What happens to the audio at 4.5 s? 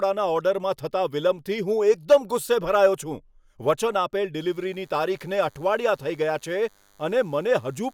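At 4.5 s a DECT cordless phone buzz is present. It starts at 4.39 s and runs to the end at 7.94 s. A nearby DECT unit transmits a burst every 10 ms, and the audio circuit rectifies it. The result is a thin 100 Hz buzz with many harmonics, faint, roughly 40 dB below the speech.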